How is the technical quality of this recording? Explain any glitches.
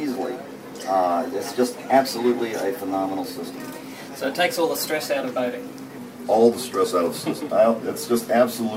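The recording has one clear fault. From 0.0 to 5.98 s there is a wrong sample rate. Playback runs about 1.09 times too fast, raising pitch about 1.5 semitones. That fits 44.1 kHz audio played at 48 kHz. The sound is slightly high and hurried.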